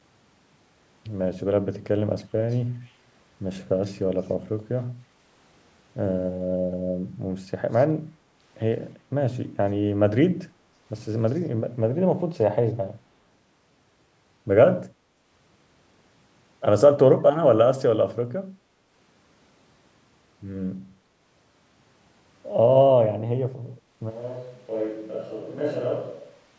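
Speech, in which faint delayed copies of the voice, roughly 30 to 40 dB down and trailing by 321 ms, surface at 2.50, 2.84, 3.83, 7.73 and 11.28 s, likely an echo leak from a loudspeaker side's canceller. From 24.11 s to the end the voice turns suddenly hollow and roomy, around 10 dB quieter with more background noise, likely a switch to a distant microphone.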